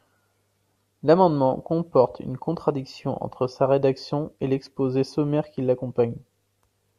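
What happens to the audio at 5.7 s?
Nothing goes wrong at 5.7 s; the speech there carries on cleanly, with no dropout, click or distortion to be heard.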